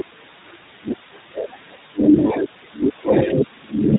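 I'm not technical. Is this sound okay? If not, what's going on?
No. The whole recording has passed through the iLBC codec, an internet-calling format that squeezes speech hard. It keeps only the lower part of the sound, with nothing above 4 kHz, so the voice sounds muffled and thin. The damage is plainly audible. The speech stays clear enough to follow, but it has a slightly rough, artificial edge. This codec rebuilds the voice from a simplified model, not the real sound.

There are also lost iLBC frames from 2.28 to 2.31 s. A tiny piece of the transmission went missing. That fits a single dropped 20 ms chunk. The decoder filled the hole by repeating the last bit of voice with some noise mixed in. You hear a brief held, buzzy smear instead of the real sound. Each chunk of this format stands on its own, so the voice is back to normal straight after.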